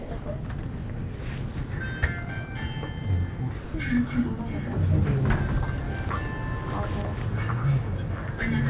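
From 0.00 to 0.11 s, at 0.23 to 0.26 s, at 1.16 to 1.19 s and from 3.62 to 3.74 s, the sound briefly gives way to flat, steady noise and then resumes. These gaps are likely sound dropped by the voice detector, with comfort noise filling in, all heard within audio band-limited to 4 kHz.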